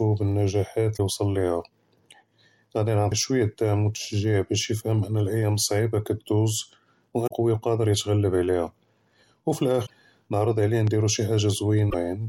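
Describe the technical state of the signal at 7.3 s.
Right around there, from 7.24 to 7.31 s, you get a short burst of damaged data in the compressed stream. The decoder hits corrupted frames, loses sync and hunts for the next valid header, so it comes out as a quick chirp, squawk, click or short hole just before "קְוִי וְקָאדֶר יִתְעַ'לֶב".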